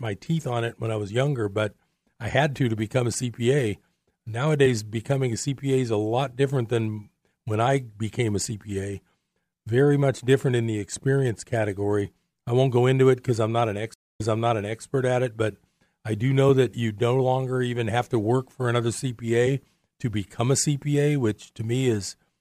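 A speech clip in which, at 13.94 s, right after "because I'm not an", the sound drops to about 0.2 s of silence and then jumps back about 0.68 s, repeating material before "at it but I" by 14.82 s. This is a stream reconnect: the connection broke, the player restarted its decoder mid-stream, and the server resent a burst from slightly earlier.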